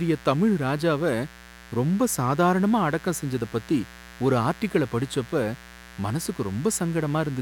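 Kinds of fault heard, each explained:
Mains buzz: A steady, raspy buzz runs under the speech for the whole clip. It comes from 60 Hz mains. Sharp spikes twice per cycle spread harmonics up into the kilohertz range. It sits roughly 20 dB below the speech.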